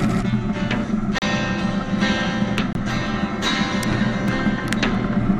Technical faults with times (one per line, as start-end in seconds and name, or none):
0.00-5.39 MP2 compression
1.18-1.22 block of digital silence
2.73-2.75 block of digital silence
4.28 block of digital silence